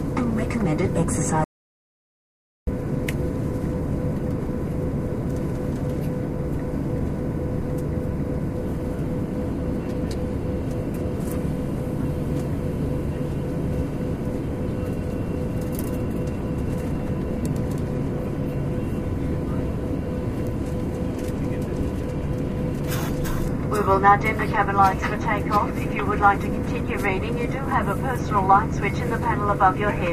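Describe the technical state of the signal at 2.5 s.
At 2.5 s the signal is dead silent, in the closing part of an audio dropout to silence that runs from 1.44 s to 2.67 s, about 1.23 s in all. The sound cuts off abruptly and returns just as suddenly, with no room tone or background in between, and whatever occurred in that span is lost. The likely cause is the input dropping out, from a disconnected device, a failed link or a stray mute, while recording carried on writing silence.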